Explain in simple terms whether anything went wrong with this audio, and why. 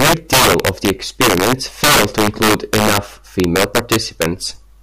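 Integer overflow affects the whole speech clip. The level was pushed past the largest number the audio format can hold, and instead of being limited, the loudest peaks wrapped around to the opposite extreme. A small share of the sound overshoots, producing harsh cracks on loud moments, far sharper than ordinary clipping.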